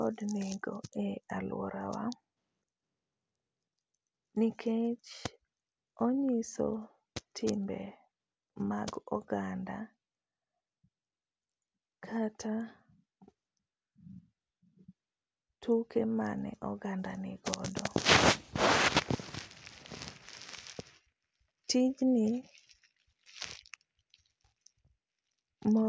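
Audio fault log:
Nothing stood out on listening to this speech recording.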